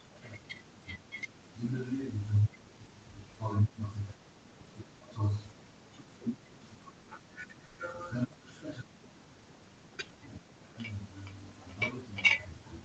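A call audio freeze runs from 7.65 to 7.80 s, likely from delayed packets emptying the jitter buffer. About 130 ms of continued last sound fills the gap as a fading buzz or hiss, and nothing is lost. A jitter buffer speed-up follows from 12.16 to 12.81 s. The receiver trims roughly a tenth of a second in short pitch-period pieces, so the speech runs about 13% faster at unchanged pitch and sounds hurried.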